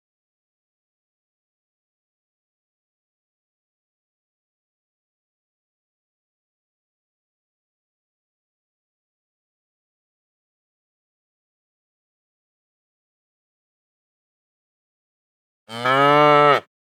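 From 13.20 s to 16.20 s the audio runs about 1.15 times fast at its normal pitch, a time-compressed catch-up after a stall. The player shortens its backlog by cutting out small pieces and cross-fading across the gaps, so the sound seems hurried. On a spectrogram harmonic lines keep their frequencies while events crowd closer together; the waveform shows compressed spacing with faint seams at each splice.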